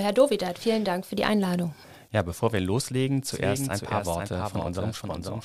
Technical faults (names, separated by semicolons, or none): doubled audio track